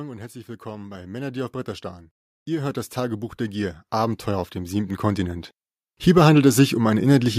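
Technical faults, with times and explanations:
0.62 to 1.63 s, automatic gain rising. The level climbs by about 5 dB over roughly a second. The gain control judged the input too quiet and turned itself up slowly. Speech and background grow louder together.
2.45 to 5.54 s, automatic gain rising. A longer, larger swell of about 12 dB over three seconds. The control keeps pushing gain upward, so the background noise rises along with the speech.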